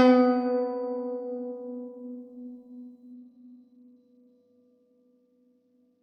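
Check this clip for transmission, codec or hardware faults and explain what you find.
One fault: a Bluetooth SBC bit pool drop that runs from 3.13 s to the end of the clip. At 3.13 s the music suddenly loses its top end. High harmonic detail goes dull, and a gritty, grainy noise settles over the remaining sound. Neither recovers before the clip ends. The sound points to the link's encoder falling from a bit pool near 28 to one near 13, around 102 kbps. With that smaller budget, the highest sub-bands receive almost nothing and the lower ones are quantised coarsely, which produces the grit.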